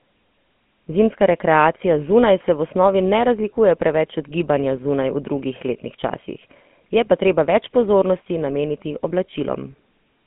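GSM full-rate codec damage runs through the whole clip. The speech is confined to a 150 Hz to 3.4 kHz band and rebuilt from a vocal-tract model fed by sparse pulse excitation. This leaves a plainly audible buzzy, gravelly roughness consistent with the 13 kbps full-rate coder.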